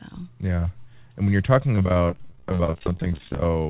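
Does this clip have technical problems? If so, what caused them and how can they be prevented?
Yes. Repeated packet loss (robotic sound) runs from 1.76 to 3.67 s, after "and when you're talking". Dozens of gaps, up to 23 ms each, are patched by repeating prior sound, which makes it choppy with pieces missing. Spectrograms show smeared, duplicated frames, and waveforms show copied cycles. Forward error correction and a steadier network prevent it.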